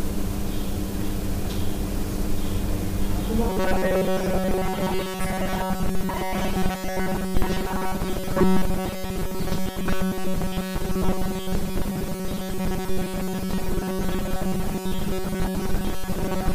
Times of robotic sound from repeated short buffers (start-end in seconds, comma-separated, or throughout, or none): 3.49-16.54